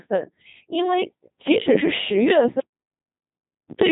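From the start the speech is robotic and buzzy, with nothing above 3.8 kHz: heavy Codec 2 vocoder damage, consistent with a 2.4 kbit/s mode, rebuilding the voice from sine waves. From 2.60 to 3.71 s the sound cuts to total silence for about 1.1 s, an audio dropout to silence, likely from lost input while silence was written.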